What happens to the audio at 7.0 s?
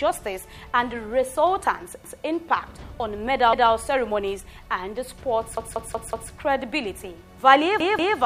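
Nothing goes wrong at 7.0 s; the audio plays through that moment intact, with no dropout, click or other fault.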